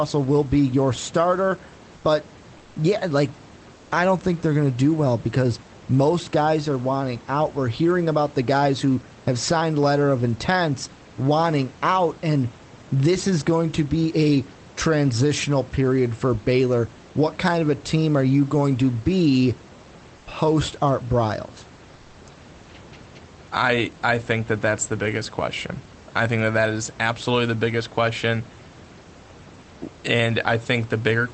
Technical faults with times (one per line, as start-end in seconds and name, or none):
2.57-2.75 comfort noise in place of the background
3.75-3.91 comfort noise in place of the background
20.17-20.25 comfort noise in place of the background